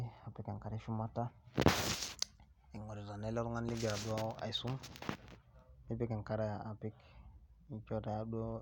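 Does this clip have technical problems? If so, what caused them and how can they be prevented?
No, this clip has no technical problems, so there is nothing to prevent.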